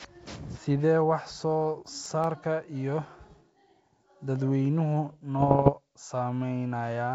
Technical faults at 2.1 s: CD scratch ticks

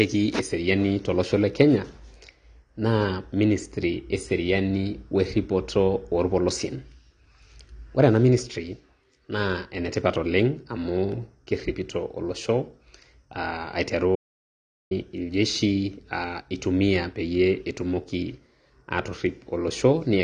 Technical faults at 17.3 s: AAC compression

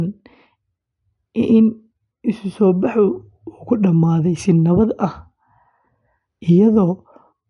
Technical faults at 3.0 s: MP3 compression

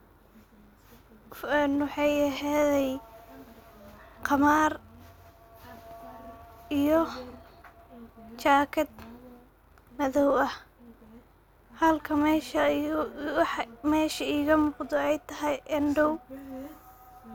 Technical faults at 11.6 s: filter restarted on every block

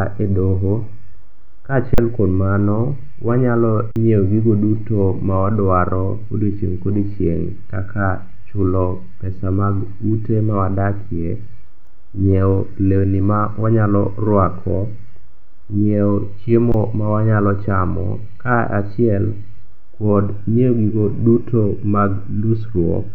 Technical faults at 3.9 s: underrun with held sample

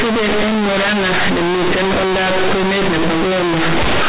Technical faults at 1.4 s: companded audio read as linear

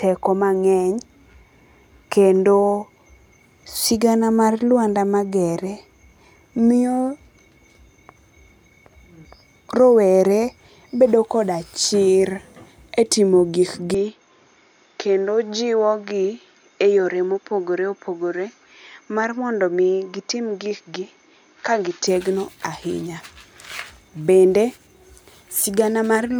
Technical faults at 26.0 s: none

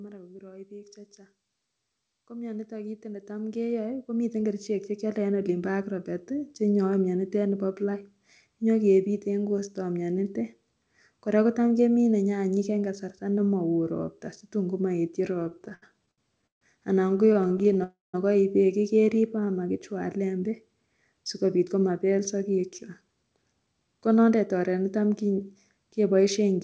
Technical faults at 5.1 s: automatic gain rising

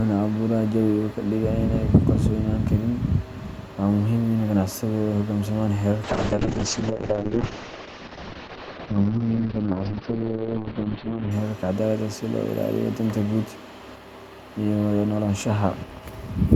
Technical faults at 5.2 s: none

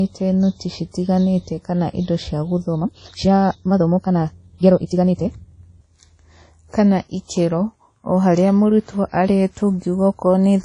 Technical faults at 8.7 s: WMA compression

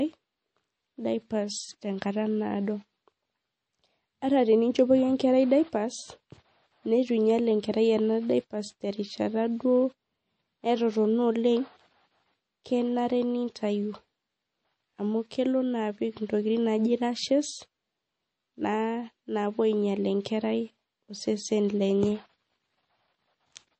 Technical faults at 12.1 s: MP3 compression

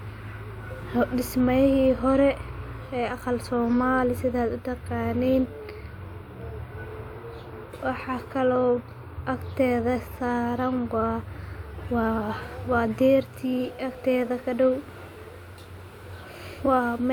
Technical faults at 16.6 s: none

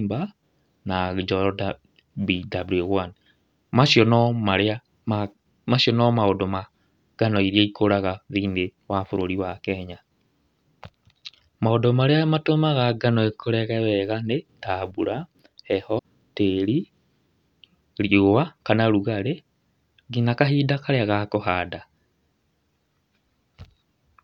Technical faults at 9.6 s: none

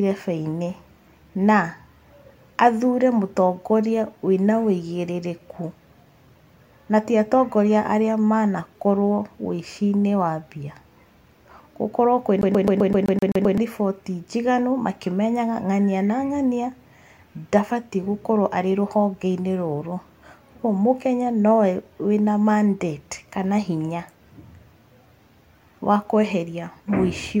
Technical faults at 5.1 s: none

